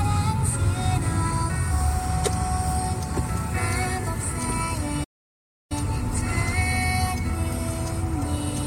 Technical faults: damaged data in a compressed stream; playback stall

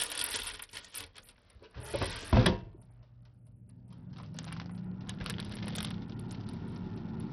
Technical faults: Bluetooth SBC compression

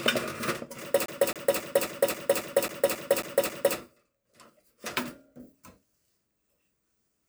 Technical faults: CD stuck on one turn

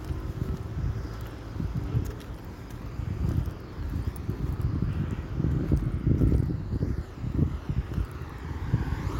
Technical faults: none

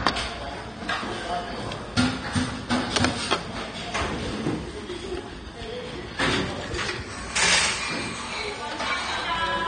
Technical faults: AAC compression

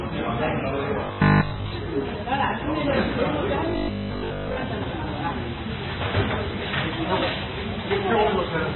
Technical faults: MP3 compression; robotic sound from repeated short buffers

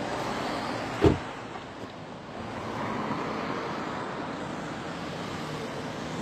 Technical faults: HE-AAC compression

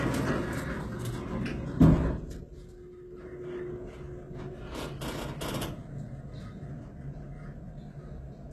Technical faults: HE-AAC compression

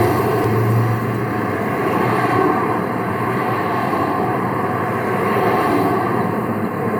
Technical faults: compressed frames skipped

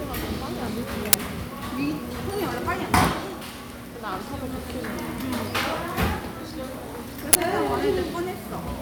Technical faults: uninitialised buffer

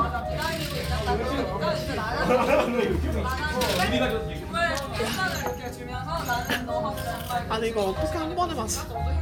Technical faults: none

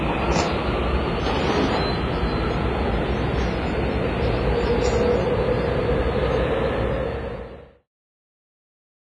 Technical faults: WMA compression

